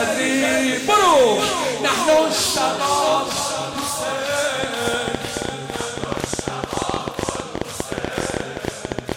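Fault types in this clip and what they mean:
Train of clicks: Loud, similar pulses repeat about 13 times per second at an uneven pace from 4.64 to 9.13 s, likely from electrical interference.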